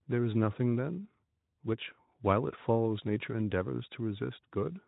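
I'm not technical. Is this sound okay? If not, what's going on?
Yes, this sound is okay, and nothing is going on with it.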